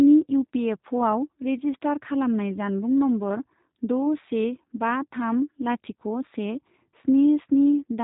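Throughout the speech, the G.729 codec damage is plainly audible: a rough, slightly synthetic buzz, consistent with about 8 kbit/s coding. Nothing passes above 3.8 kHz, but unlike plain band-limiting, the voice is rebuilt from a filter and sparse pulses rather than merely muffled.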